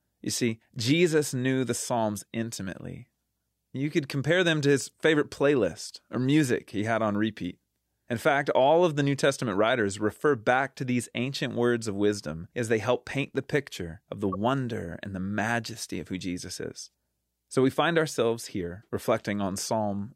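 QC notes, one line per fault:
10.10–10.12 s and 14.32–14.36 s, corrupt frame decoded: a single damaged frame gets played anyway each time, so misplaced energy gives a brief chirp, squeak, blip or burst of noise, just before "back to these ancient" and after "the picture of the". The second one is louder.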